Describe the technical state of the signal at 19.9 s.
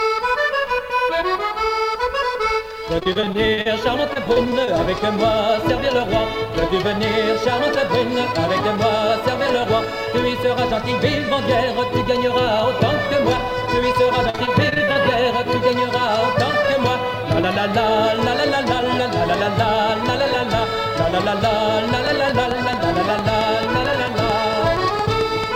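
At 19.9 s the signal is intact, with no dropout, distortion, glitch or other technical fault audible at that moment.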